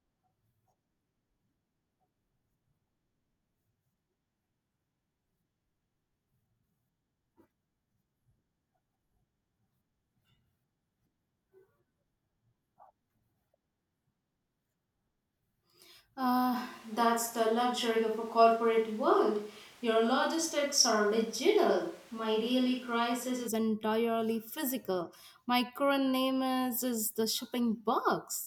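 The close microphone likely dropped out from 16.56 s to 23.46 s, leaving the recording on a distant microphone for almost seven seconds. This is a switch to a distant microphone: the speech turns roomy and hollow at once, thinner in the bass, with room noise rising to roughly 30 dB below the speech. The overall level stays about the same, and the change into and out of this sound is abrupt at both ends.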